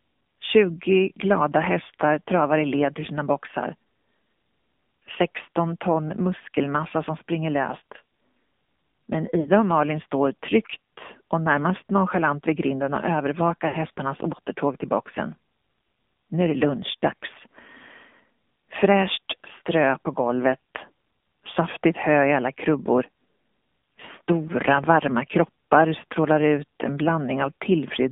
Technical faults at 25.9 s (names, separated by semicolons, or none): AMR narrowband mobile codec